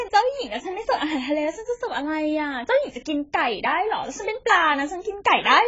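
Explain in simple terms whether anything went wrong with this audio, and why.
AAC compression damage runs through the whole recording. The speech sounds dull and smeared, because nothing above about 7.7 kHz survives, so the crisp top end of the sound is simply gone. This is likely the result of squeezing the audio very hard with an AAC encoder: to save space, it throws away the detail our ears notice least. At this heavy setting, hiss-like sounds turn fizzy and held sounds can warble.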